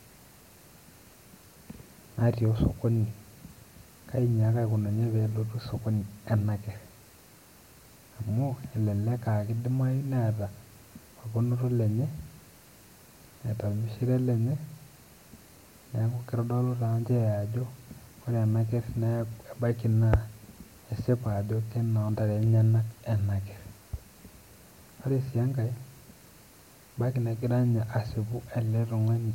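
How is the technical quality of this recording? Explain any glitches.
No technical faults can be heard in the recording: the signal stays steady and intact throughout, with nothing that calls for explanation.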